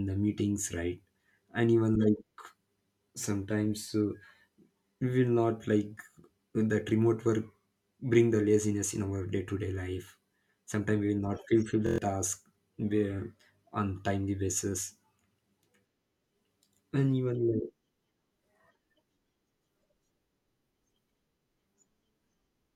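At 11.87 s the speech gives way to a system hang loop that lasts until 11.98 s. The playback side stopped feeding new audio while the sound hardware kept replaying the same ring buffer, so one 23.22 ms slice repeats five times. That loop length fits a 1024-sample buffer. Repeating at 43.1 Hz, it comes across as a brief, rough buzz rather than a distinct stutter, and roughly a tenth of a second of speech is lost.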